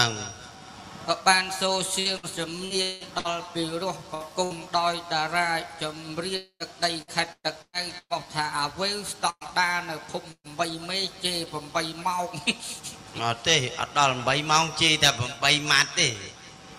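Repeated packet loss (robotic sound) runs from 1.99 to 3.27 s. Five separate gaps open up in quick succession, and the longest lasts 182 ms. Each one is bridged by stretching the preceding sound forward, so about a third of that span is synthetic fill, with about 420 ms of real audio gone. The patching repeats before the sound can settle, which gives it a choppy, mechanical, robot-like grain with chunks missing.

A burst of packet loss follows at 4.14 to 4.23 s and again at 4.44 to 4.53 s. Each time, about 60 ms of consecutive packets failed to arrive in time, and the receiver filled the hole by extending the last sound while lowering its level. It comes out as a short held buzz or fading hiss, and then the sound picks up further along, skipping the lost part.

A long network dropout appears at 6.36 to 6.63 s. The last sound is carried on as a decaying tone for most of that time, then the final 80 ms drops to silence before audio returns, with 240 ms of the original never heard. 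A lengthy interruption in incoming data is the likely cause.

Repeated packet loss (robotic sound) returns from 7.02 to 8.13 s. Four gaps fall within the span, the longest 117 ms, and concealment covers 36% of it. The rapid cycle of substituted and genuine audio again produces a clipped, robotic texture with pieces absent.

Two more bursts of packet loss land at 9.30 to 9.44 s and 10.32 to 10.47 s, each removing 120 ms. In both, the extended sound fades out. The first leaves 60 ms of silence and the second 70 ms before the audio resumes past the missing section.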